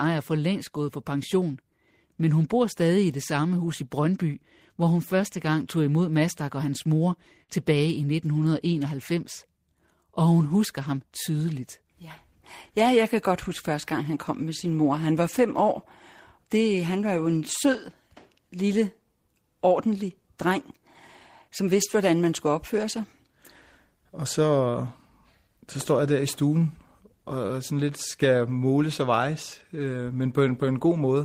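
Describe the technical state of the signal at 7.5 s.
Right after "og hans mor", from 7.43 to 7.58 s, there's a short concealed packet loss. Roughly 40 ms of audio didn't reach the decoder in time, so the receiver stretched the preceding sound to bridge the gap and blended back in, leaving a brief smeared wobble.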